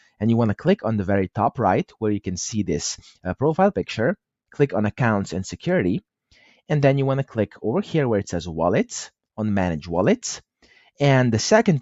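The noise suppressor mistook parts of the sound for noise twice, as sound cut by the noise suppressor: from 6.32 to 6.60 s it pulls the level down by about 9 dB, and from 10.62 to 11.00 s by about 13 dB, so each stretch sinks in level, over about 200 and 150 milliseconds respectively.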